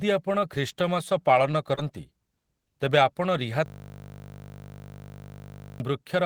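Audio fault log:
1.09–1.79 s, repeated packet loss (robotic sound): Four brief dropouts, the longest 20 ms, are each bridged by stretching the preceding sound for about 57 ms in total. Because the holes arrive in quick succession, the patched audio turns choppy and robotic, with about 8% of the span concealed.
3.66–5.8 s, system hang loop: The system stalled while the playback hardware kept cycling one 20 ms slice of its buffer, repeating it more than a hundred times. Looping at 50 Hz, it merges into a steady buzz and replaces roughly two seconds of real audio.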